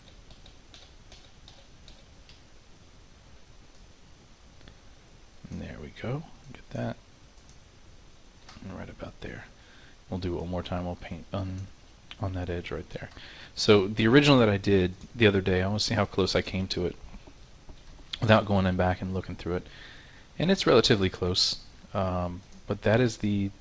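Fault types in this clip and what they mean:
No faults are present; the audio carries the ordinary signature of a wideband call path, with nothing above 8 kHz and the usual coding texture of a wideband call codec, which fits G.722 at 64 kbps.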